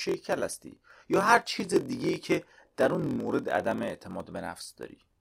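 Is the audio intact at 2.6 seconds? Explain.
No. A block size mismatch (padded) runs through the whole clip, including 2.6 s. One stage writes shorter blocks than the next reads, which fits a 1024-sample read block, so zeros fill the remainder of each block and a brief silent gap repeats at 43.1 Hz. That repeating gap is heard as a buzz over the speech. The inserted silence also stretches the audio, which plays at 0.938 times its proper speed.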